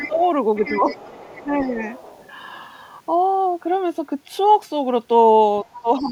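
In this speech clip, an echo canceller that likely failed to fully remove loudspeaker pickup lets the other side's voice leak through from 0.0 to 0.24 s and from 0.55 to 2.32 s, around 15 dB below the talker. From 5.65 s to the end it is fainter, roughly 25 dB down. When both sides talk at once, the same canceller likely mistakes the talker for echo, causing speech suppressed in double talk. The voice dips by roughly 15 dB at 0.08 to 0.21 s, about 5 dB at 0.69 to 0.86 s, around 10 dB at 1.4 to 1.85 s, and about 15 dB from 5.64 s to the end.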